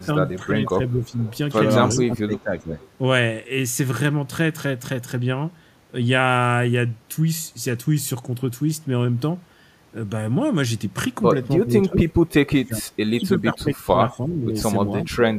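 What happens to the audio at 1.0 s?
At 1.0 s the speech level sags briefly, from 1.0 to 1.18 s. This is speech suppressed in double talk: the echo canceller on the loudspeaker side, likely confused by both sides talking at once, turns down its own talker along with the echo. The dip is shallow, around 5 dB at its deepest and roughly a fifth of a second long. On the waveform it shows as a short pinch in the envelope. On the spectrogram the energy briefly fades.

Overlapping it, from 1.03 to 1.38 s, is an echo leak. A faint delayed copy of the voice, trailing the original by 361 ms and sitting about 25 dB below it, is likely loudspeaker pickup that the canceller failed to remove. On the spectrogram it shows as a weak repeat of the speech's harmonic pattern, shifted right by about a third of a second.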